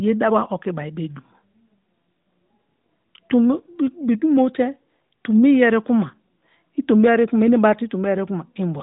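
No technical faults are audible in this speech.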